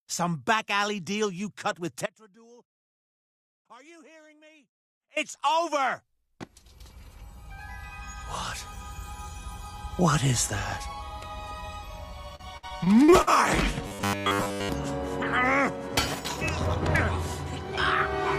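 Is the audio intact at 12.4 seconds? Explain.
No. Repeated packet loss runs from 12.35 to 13.29 s: seven gaps, the longest 57 ms, are patched by extending prior audio, giving choppy sound with pieces missing.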